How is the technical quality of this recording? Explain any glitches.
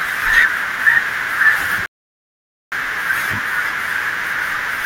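One glitch stands out: a rebuffering stall from 1.86 to 2.72 s. Playback ran dry and paused, adding 0.86 s of silence before the speech resumed exactly where it stopped, with nothing skipped. The waveform flatlines, and the spectrogram shows a blank vertical band.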